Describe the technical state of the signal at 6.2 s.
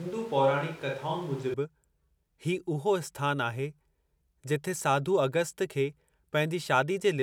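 At 6.2 s the speech signal is intact, with no audible technical fault at that moment.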